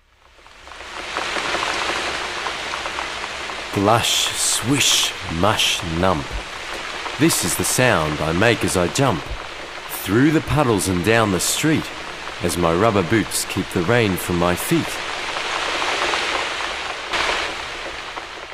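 A digital gain stage appears to have switched its setting instantly, with no ramp between values, likely from a level change or bit shift applied between one sample and the next. This is a sudden gain jump at 17.13 s, lifting the level by about 11 dB and holding it there until the clip ends at 18.53 s. The sound and its background noise step up together at that instant, so the noise floor rises just as abruptly as the wanted signal.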